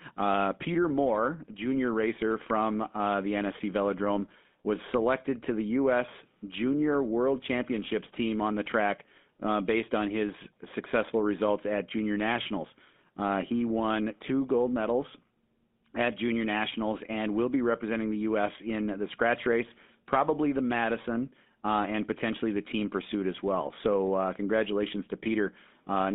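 Speech run through the GSM full-rate codec for the whole clip, and you can hear it: a buzzy, gravelly roughness where the codec rebuilds the voice from a crude pulse train. There's also a narrow phone band of roughly 200 Hz to 3.6 kHz, and the damage fits a 13 kbps stream.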